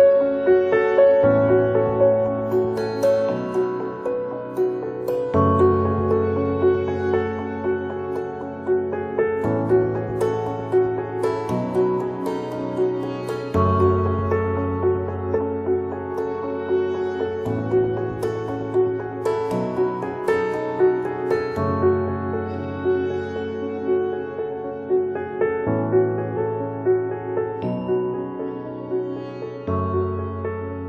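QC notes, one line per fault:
15.35–15.38 s and 26.36–26.39 s, compressed frames skipped: the audio jumps forward, losing roughly 200 ms at the first point and roughly 100 ms at the second. Whole frames were missing or rejected by the decoder. The jump sizes point to a frame length near 46 ms. No silent gap is heard at either join, unlike a dropout.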